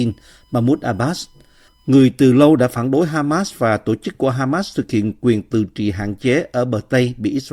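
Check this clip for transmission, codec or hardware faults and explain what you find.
A steady, fixed-pitch whine sits under the speech from 0.0 to 2.0 s, faint at around 45 dB below the speech and ending just before "từ lâu đã phản". This is USB whine. Its tone is at 1 kHz with the strongest component at 3 kHz, a harmonic of the bus's 1 ms frame rate. The current the USB interface draws on each frame is leaking into the audio path through shared power or ground.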